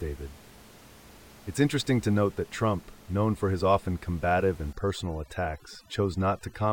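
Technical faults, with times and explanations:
4.73 to 6.72 s, overdone noise removal: the noise reduction is set too strong, so frequency bands near its noise estimate are pulled far down, taking quiet speech detail with them; the room noise, about 25 dB below speech, collapses into twinkling specks.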